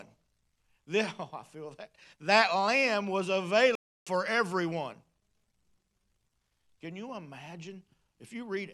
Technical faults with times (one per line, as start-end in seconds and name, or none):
3.75-4.07 playback stall